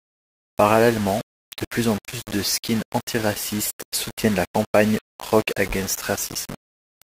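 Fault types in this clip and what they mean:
Low bit depth without dither: gritty, grainy distortion rides on the speech throughout and changes with it, while quiet stretches sputter or break up. The likely cause is rounding to a few levels without dither, fitting about 5 bits, with error roughly 15 dB below the signal.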